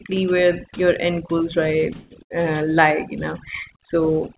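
A speech recording carried over a call path with nothing above 4 kHz, which fits a narrowband G.711-style codec. Throughout, overdone noise removal leaves the background lowered and broken up into twinkling specks, because individual frequency bands are switched down whenever they fall near the estimated noise level. That fluttering, band-by-band loss differs from the steady, clean treble cut of the narrowband channel. Just after "where your end goals", from 1.94 to 2.12 s, a call audio freeze holds the last sound and lets it fade for about 164 ms, likely from delayed packets emptying the jitter buffer. Speech then resumes exactly where it stopped, so time is inserted but nothing is lost. Shortly after, from 2.22 to 2.32 s, just before "uh lie you know", a burst of packet loss also sustains and fades the last sound, but here about 80 ms of speech is skipped when playback resumes. That missing stretch is what separates it from the freeze.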